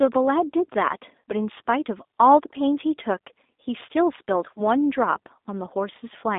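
Throughout, the speech carries the G.729 codec's sound. Its 8 kbit/s model rebuilds each frame from a vocal tract filter, a pitch predictor and a few pulses, so the speech is rough and slightly synthetic inside a line band of 250 Hz to 3.7 kHz. A plain band-limit would sound muffled but not grainy.

From 1.20 to 1.22 s, VoIP packet loss concealed by the speech codec stretches the sound into a short, fading buzz or coloured noise covering about 40 ms of missing audio, which fits two lost packets. Weakened speech follows for a moment afterward. A hard dropout would cut to silence or click instead of continuing and decaying.

The same concealment returns from 4.56 to 4.61 s for about 20 ms of lost audio, which points to a single packet.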